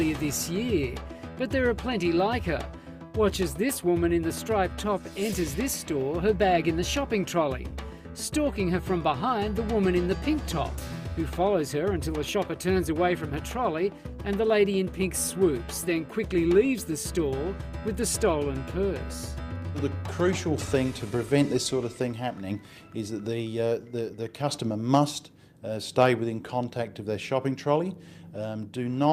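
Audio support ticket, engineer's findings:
No faults found in playback.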